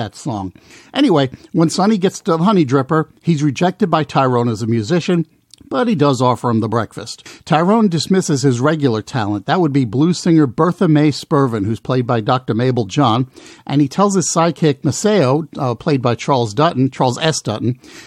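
Speech recording with no technical faults to report.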